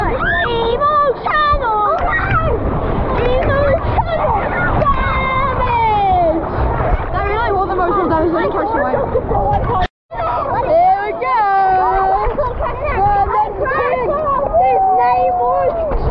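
Nothing goes wrong anywhere along the way here, so there's no fault to point to at any moment in the clip.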